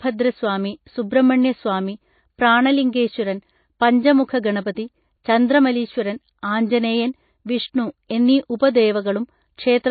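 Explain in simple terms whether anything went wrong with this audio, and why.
The speech was likely squeezed hard by MP3 compression, which throws away detail to save space. Nothing above 4.6 kHz survives, so it sounds dull, watery and swirly throughout.

At 8.08 to 8.10 s, just after "ചന്ദ്രമലീശ്വരൻ ആഞ്ജനേയൻ വിഷ്ണു", the codec spread its noise ahead of a sharp sound. This pre-echo is a brief hiss before the attack, which sounds smeared.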